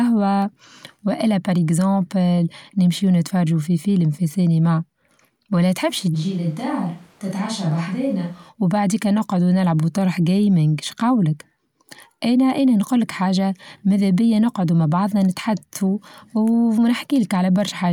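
At 6.16 s the speech suddenly turns roomy and hollow. The bass thins out. The level drops by roughly 5 dB. Room noise rises to around 30 dB below the speech. This is a switch to a distant microphone. The close microphone's signal likely dropped out, leaving only a pickup farther from the talker. That pickup hears more of the room and less of the voice. At 8.48 s the close sound returns just as abruptly.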